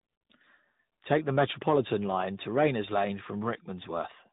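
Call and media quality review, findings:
Rough, muffled, warbly speech for the whole clip, with nothing above 3.8 kHz. Probable cause: tandem speech coding. The path sounds like a CVSD link into G.711 mu-law, then AMR-NB at around 10.2 kbit/s. The two speech coders in series each re-encode the previous one's decoded output, so their distortions stack.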